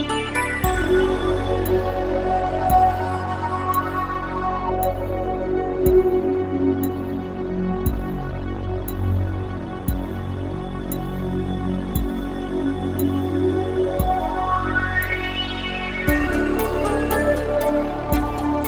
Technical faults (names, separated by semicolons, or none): jitter buffer speed-up